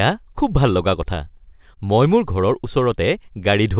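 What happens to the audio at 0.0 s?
Nothing goes wrong at 0.0 s: the speech starts intact there, carried through the call path with the narrow telephone bandwidth that stops at 4 kHz.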